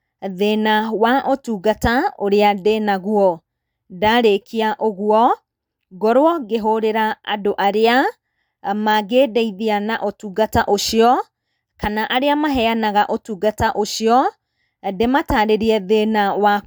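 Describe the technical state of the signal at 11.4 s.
At 11.4 s the speech signal is intact, with no audible fault at that moment.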